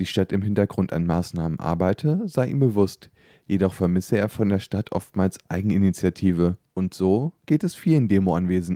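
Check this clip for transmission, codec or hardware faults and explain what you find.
Nothing audible points to a transmission, codec or hardware fault anywhere in the clip.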